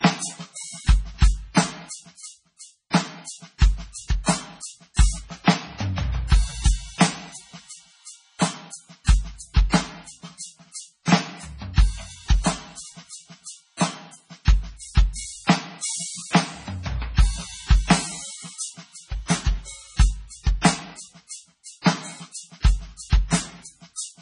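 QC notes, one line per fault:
throughout, MP3 compression: likely a bit-starved encoder, as at 24 kbps, cuts everything above 10.5 kHz and flickers weak components, so the music sounds dull and watery.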